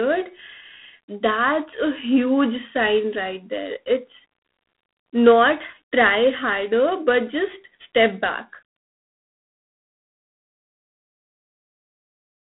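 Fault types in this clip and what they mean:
G.726 ADPCM: a harsh, rasping hiss that rises and falls with the speech, with nothing above 3.9 kHz. At 24 kbit/s, too few bits per sample encode each prediction difference.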